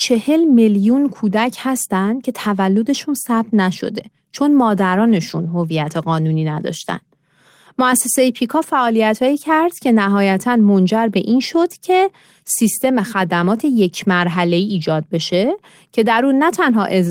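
No technical faults are audible.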